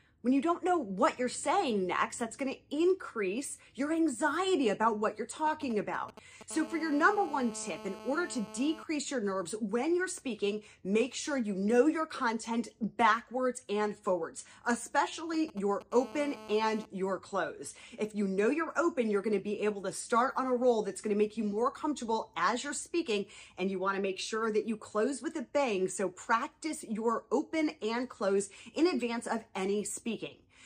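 A galloping dit-dit-dit of short rasping buzzes breaks in from 5.47 to 6.43 s, sitting roughly 15 dB below the sound. These are GSM signalling bursts: a 2G phone close to the equipment is sending brief clusters of radio bursts, as it does when setting up a call, and the audio circuitry rectifies them into short bursts of a 217 Hz buzz. The same pattern returns from 15.34 to 15.83 s.

Straight after each of those passages the galloping turns into a continuous hard, raspy drone, from 6.51 to 8.83 s and again from 15.92 to 16.86 s, at about 16 dB below the sound. This is GSM phone buzz: once the call is up, the handset transmits 217 bursts per second, and the rectified pulses become a steady 217 Hz tone packed with harmonics that bears no relation to the audio itself.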